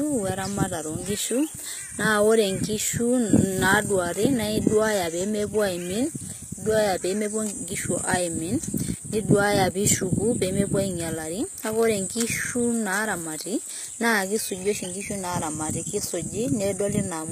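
A speech clip with plainly audible codec damage from start to finish. The treble sounds bright but synthetic, with s sounds gritty and lispy and upper harmonics misaligned, consistent with spectral band replication. The likely cause is HE-AAC compression at roughly 20 kbps.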